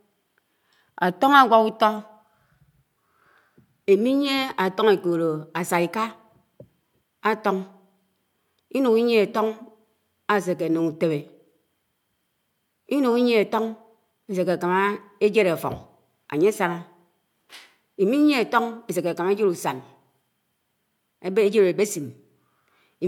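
A speech recording with no audible technical fault anywhere in it. There is nothing here that needs a time or a cause attached.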